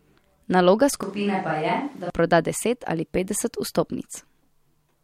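From 1.03 to 2.10 s the speech abruptly turns roomy, hollow and bass-light, about 5 dB quieter, with room noise around 30 dB below it: a likely switch to a distant microphone. Unlike added reverb, tone, level and noise shift together and snap back.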